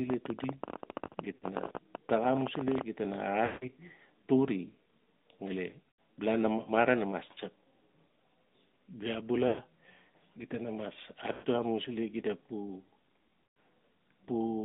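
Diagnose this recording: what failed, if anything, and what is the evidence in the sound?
The codec stage failed. This speech passes through the AMR narrowband mobile codec throughout. The band runs only from 200 Hz to 3.7 kHz. The voice has plainly audible buzzy, synthetic texture, which fits a mid-rate mode near 10.2 kbps. Coarse vocal-tract modelling causes it.

The network stage also failed, with lost AMR speech frames. The dropouts fall at 1.36–1.46, 3.46–3.67, 5.93, 9.48–9.60, 11.32–11.45 and 13.44–13.56 s. In each, the decoder repeats the last pitch and tract settings with falling gain. The sound smears, then fades, and the speech returns rough.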